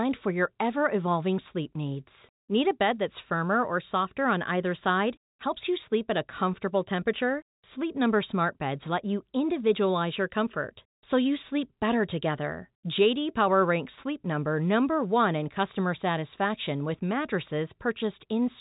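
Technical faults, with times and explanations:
No faults found; the speech sits in standard G.711 mu-law telephone coding at 64 kbps with nothing above about 3.8 kHz, as that format requires.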